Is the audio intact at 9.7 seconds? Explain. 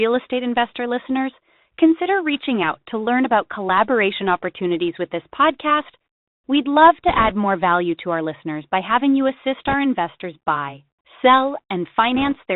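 No. From 9.67 to 9.74 s there are bit errors on a Bluetooth voice link. Flipped bits, around 4 percent, add a brief rushing crackle without loud clicks. Underneath, the Bluetooth CVSD headset codec keeps the speech band-limited below 4 kHz, with scratchy sibilants and a granular hiss, consistent with a 64 kbps link.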